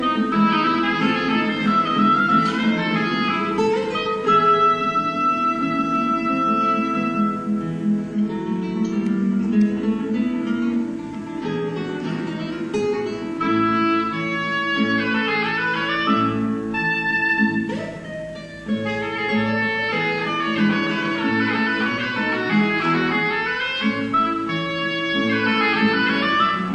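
No technical faults can be heard anywhere in the audio, and the signal stays continuous and stable throughout.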